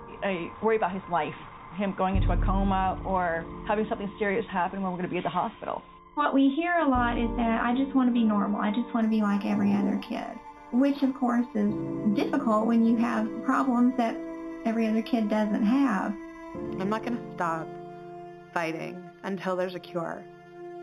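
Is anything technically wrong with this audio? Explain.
Yes. From 9.02 s to the end, there is imaging from linear upsampling. The rate was raised by joining samples with straight lines, which points to an 8 kHz source raised to 44.1 kHz. Straight-line interpolation filters poorly. So the band's top edge sounds dull, and a faint mirrored copy of the spectrum sits between 4 kHz and 8 kHz, around 30 dB below the signal. It adds a light metallic shimmer to the upper range.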